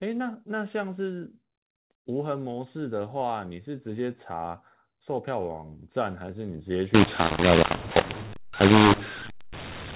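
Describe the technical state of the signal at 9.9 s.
At 9.9 s the signal is inside a mu-law and A-law mix-up that runs from 6.94 s to the end of the clip. Telephone audio encoded with mu-law is being decoded with the A-law curve, so sample levels are scrambled, some too large and others too small, with the quietest lifted well above silence. The speech sounds harsh and distorted, and pauses fill with noise. On the waveform, gaps no longer sit near zero, and the amplitude envelope looks uneven and jagged. On a spectrogram, broadband noise fills the pauses, still capped by the 4 kHz telephone band limit.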